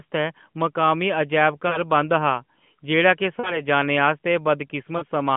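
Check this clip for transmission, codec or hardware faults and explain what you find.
There is one fault here: lost AMR speech frames at three points. At 1.68 to 1.81 s, between "मकामी अजैब" and "बंद हा"; at 3.40 to 3.63 s, just before "जाने आस्तै"; and at 4.98 to 5.05 s. Each gap of about 40 ms, consistent with two 20 ms frames, left the decoder repeating its last good pitch and vocal tract settings at falling gain, so the sound smears briefly and dips before recovering. All of it is carried through the AMR narrowband mobile codec, with nothing above about 3.4 kHz.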